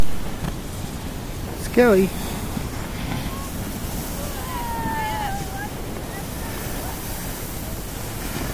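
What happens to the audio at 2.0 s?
Nothing goes wrong at 2.0 s; the audio plays through that moment intact, with no dropout, click or distortion.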